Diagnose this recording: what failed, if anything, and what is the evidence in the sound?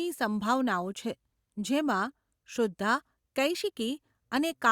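Nothing in the chain from capture to playback can be heard to have failed: the speech signal stays continuous and steady at a consistent level, with no disturbance traceable to any stage.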